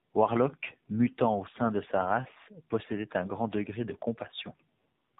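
A speech clip marred throughout by tandem speech coding: the sound is rougher and more warbly than one narrowband coder would leave it, with nothing above 3.8 kHz, which fits two AMR-NB stages in a row, the second re-coding the first's artefacts.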